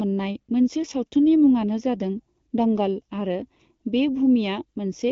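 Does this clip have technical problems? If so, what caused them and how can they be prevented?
Yes. Throughout the speech there is channel delay (comb filtering): one channel arrives roughly a third of a millisecond late, and summing to mono cancels energy in fixed, evenly spaced notches starting around 1.5 kHz, giving a hollow, phasey tone. Unlike the AMR wideband codec's clean top cutoff near 7.6 kHz, these dips sit inside the speech band and never move. To prevent it, align channels sample-accurately or avoid summing two differently delayed copies to mono.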